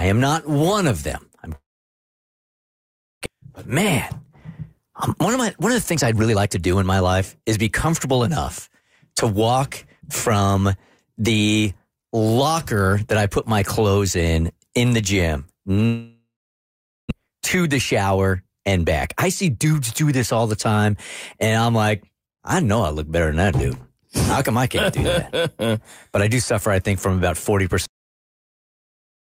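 From 1.55 to 3.28 s there is a long network dropout, likely from packets that never arrived. The last sound is stretched into a brief fading buzz, and then about 1.6 s of near-silence follows. Roughly one second of speech is gone. On a spectrogram this shows as smeared, decaying bands followed by an empty gap. The waveform collapses to a flat line before the speech resumes.

Right after, from 3.35 to 8.30 s, the jitter buffer speeds up playback to drain the backlog. It runs about 10 percent fast and trims away around half a second in total by cutting out short pitch-period slices. The pitch stays the same, but the speech sounds hurried. A waveform shows tiny splices between cycles, and spectrogram harmonics stay level while syllables arrive closer together. A milder speed-up follows from 9.12 to 11.14 s, at about 7 percent fast.

After "in in the gym", a second long network dropout runs from 15.86 to 17.13 s, likely for the same reason. 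It has the same fading fill and about 0.8 s of silence, and again roughly a second of speech is lost. A speed-up then runs from 17.20 to 19.74 s at about 8 percent fast, ending just before "do this all the".

At 27.86 s, right after "I think from about", the recording has a cut-off end. The speech stops mid-sound, with no decay, and drops straight to digital silence. The waveform ends abruptly, and the spectrogram goes black across all frequencies at once.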